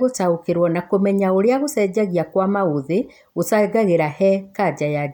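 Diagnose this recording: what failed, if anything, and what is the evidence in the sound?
Listening closely to the speech, nothing stood out as a fault at any stage of the chain.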